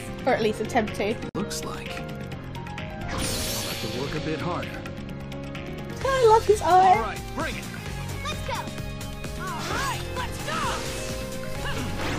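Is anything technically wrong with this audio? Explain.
Yes. At 1.29 to 1.35 s there is a gap at a join of encoded pieces: a 56 ms silence where separately encoded segments meet, their encoder delay and end padding left untrimmed. On a waveform and spectrogram it shows as a flat, empty band with smeared edges, before the sound resumes where it stopped.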